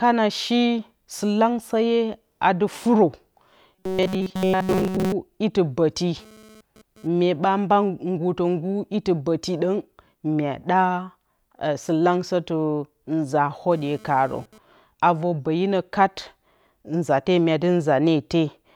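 From 3.75 to 5.12 s, just before "iti ɓǝti", new audio is likely arriving too seldom, so the playback software keeps filling the gaps by looping the most recent fragment of sound while the real speech in between is dropped. For most of this stretch the audio is repeated material rather than fresh signal. The loop imposes a fixed pitch of 188 Hz, which fits a buffer of roughly 5.3 ms. The result is robotic sound from repeated short buffers: the voice becomes a stiff, metallic buzz that only loosely tracks the speech.

From 6.19 to 7.07 s, between "iti ɓǝti" and "myeɓa mba", and again from 13.71 to 14.58 s, just before "avǝr ɓǝyinǝ kat", a nearby 2G handset is sending data in radio bursts at 217 Hz. The audio circuitry rectifies those pulses into the signal path. This GSM phone buzz is a harsh, rasping tone at 217 Hz, rich in harmonics, about 26 dB below the speech. It has no relation to the speech and appears only in these two bursts of data traffic.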